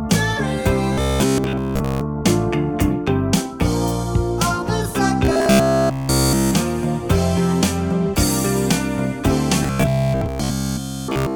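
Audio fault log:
0.93–2.04 s, 5.25–6.54 s, 9.63–11.35 s, robotic sound from repeated short buffers: a stiff metallic 66.7 Hz buzz, likely a 15 ms chunk replayed while late audio is skipped.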